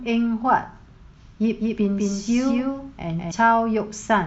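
A doubled audio track runs from 1.60 to 3.32 s: a second full-band copy of the speech sits around a fifth of a second behind the original, roughly 5 dB quieter. It has no reverberant tail or room colouring, and it cuts in and out abruptly at both ends. The likely cause is the same signal arriving again through a slower path, or an edit leaving two offset copies stacked together.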